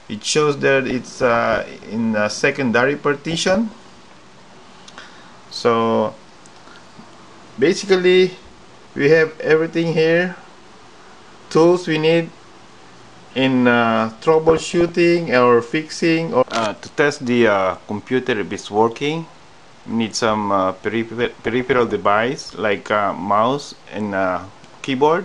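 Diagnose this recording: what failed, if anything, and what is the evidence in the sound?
Bit errors from weak DAB reception corrupted MP2 codec frames, putting short blips of noise into single sub-bands: DAB burbling at 0.89–1.88, 3.28–3.75, 14.48–14.90 and 21.21–22.01 s.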